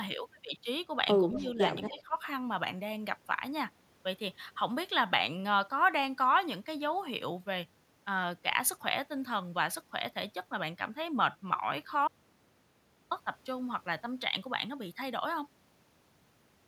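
At 1.32 to 1.52 s and again at 1.86 to 2.02 s there is echo leak: a faint copy of the speech trails the original by about 230 ms, roughly 15 dB down the first time and about 25 dB down the second. The likely cause is an echo canceller on a loudspeaker end letting part of its microphone pickup through. On a spectrogram it looks like pale duplicated harmonic bands shifted right by a quarter second.

Overlapping those spots, from 1.38 to 1.58 s and 1.91 to 2.17 s, the talker's speech is suppressed in double talk. Level dips by around 5 dB and then around 15 dB, over roughly 100 ms and then 200 ms, probably because the canceller ducked everything while both sides overlapped. The waveform envelope visibly sags.

From 12.08 to 13.11 s an audio dropout to silence removes about 1.03 s, likely from a lost input whose gap was filled with silence. The speech stops mid-flow and resumes abruptly. The waveform shows a flat line and the spectrogram a dark strip with no room tone.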